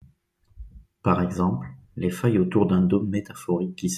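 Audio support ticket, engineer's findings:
No faults found in this speech clip.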